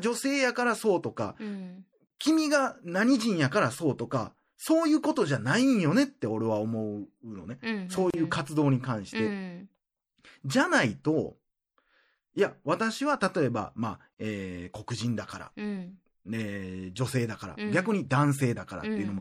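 MP3 compression runs through the whole speech clip. The damage is plainly audible. The sibilants turn watery and swirly as weak frequency detail drops in and out between frames. Consonant attacks smear. This is likely a lossy MP3 encode starved of bits, and the depth of the damage fits a bitrate around 64 kbps.

A gap at a join of encoded pieces opens at 2.07 s. Another comes at 8.10 s, and a third at 14.14 s. They repeat every 6.0 s. Each one is about 34 ms of silence cut into continuous speech. The codec smears the edges. The sound then resumes where it stopped. The pieces were encoded separately and joined untrimmed, so each encoder's start-up delay and end padding remain as silence.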